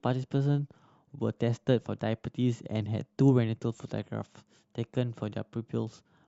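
Nothing goes wrong anywhere in this bit of speech, so there's no technical fault to point to at any moment.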